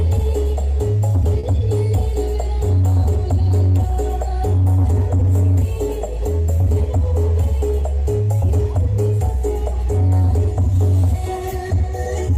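At 1.39 to 1.46 s, short concealed packet loss: 40 ms went missing and was filled by extending the preceding sound, leaving a brief smear rather than a silent gap.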